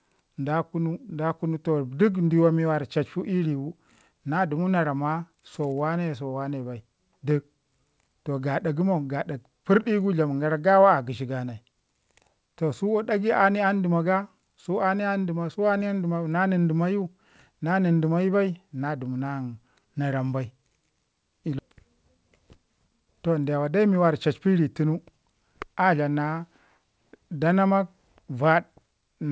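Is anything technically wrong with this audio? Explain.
No, nothing here is actually wrong: the speech just carries the usual character of a call, with the top end stopping around 8 kHz, which fits a wideband call codec like G.722 doing its normal job.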